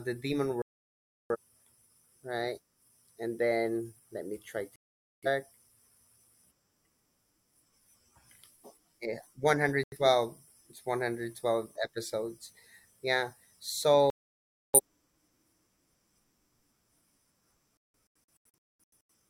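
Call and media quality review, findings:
Digital broadcast dropout: speech cuts to silence five times.

0.62–1.37 s, after "the demon"; 4.76–5.28 s, after "then let me try"; 9.84–9.97 s; 14.10–14.80 s; 17.77–19.14 s, as scattered short holes, longest 0.21 s.

Receiver muting on lost or checksum-failed frames; audio in gaps unrecovered.

Waveform: flat silent spans, abrupt edges. Spectrogram: full-band blank vertical columns.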